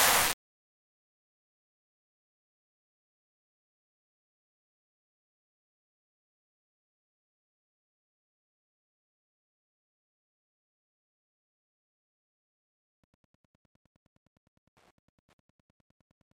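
From 12.97 s to the end at 16.39 s, a steady ticking about ten times a second sits well below the main sound. This is Wi-Fi interference: a nearby radio's beacon, sent every 102.4 ms, is rectified by the audio circuit and heard as clicks.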